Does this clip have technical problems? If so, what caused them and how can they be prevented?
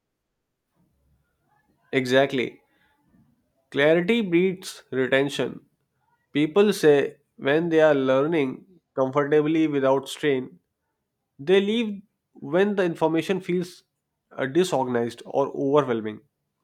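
No, nothing stood out as a technical problem when listening to this speech recording, so there is nothing to trace back or prevent.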